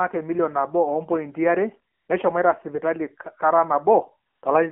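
Speech heard through an AMR narrowband mobile codec: the whole clip sits inside a telephone band of roughly 200 Hz to 3.5 kHz, and the voice has a plainly audible buzzy, synthetic edge. That edge comes from the codec rebuilding each 20 ms frame from a vocal-tract model excited by a handful of pulses, and the coarseness suggests a low mode of about 7.4 kbps. On a spectrogram nothing appears above 3.5 kHz, and harmonics look smeared and blocky rather than finely striped. Twice the codec's AMR comfort noise takes over: from 1.94 to 2.08 s (140 ms) and from 4.30 to 4.42 s (120 ms), the phone stops sending speech frames and the receiver fills the gap with smooth synthetic hiss built from a rough level-and-spectrum description. The real background drops out and returns abruptly. On the waveform these spans show as flat, even-textured noise beds with sharp boundaries, and on a spectrogram they show as uniform grey blocks.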